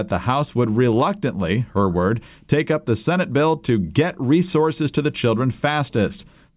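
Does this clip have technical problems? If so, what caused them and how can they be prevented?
No, there are no technical problems in this clip.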